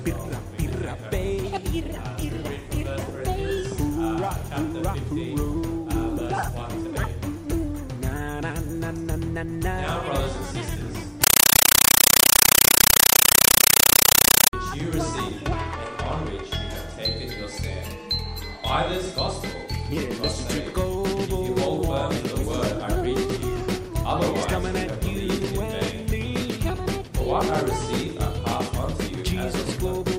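From 11.24 to 14.53 s the audio is replaced by very loud, chattering static, a compressed stream played as audio. An AC-3 (Dolby Digital) stream was passed as if it were plain samples and never decoded. Each frame becomes an 8 ms burst of noise followed by silent padding, repeating 31.25 times a second, which fits a 384 kbps stream. That strict, even stutter with quiet gaps sets it apart from clipping or broadband interference.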